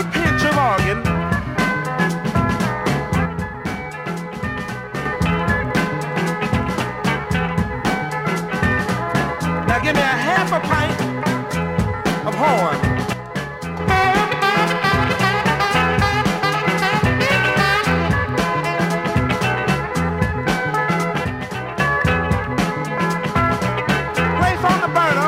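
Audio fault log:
3.3–5.1 s, 13.1–13.8 s, 21.2–21.8 s: one channel drops out. The sound abruptly falls about 6 dB, then recovers; likely one stereo channel briefly lost before mono summing.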